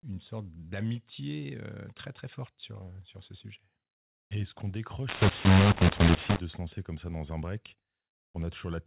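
Telephone-band speech in G.711 mu-law coding, cut off above 4 kHz, has a mu-law and A-law mix-up from 5.09 to 6.39 s. Samples written as mu-law are read back as A-law, scrambling levels so the audio turns harsh and distorted, and quiet stretches fill with noise.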